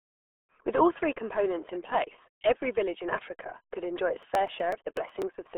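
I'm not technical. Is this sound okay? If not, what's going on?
No. The whole clip went through the RealAudio 14.4 codec, an old dial-up format. Nothing above about 3.8 kHz survives, so the speech sounds muffled and gargly.

From 4.23 to 5.47 s, just after "could enjoy its", there are periodic USB or driver dropouts. About every 0.124 s, a tiny slice of sound is skipped, causing regular ticks.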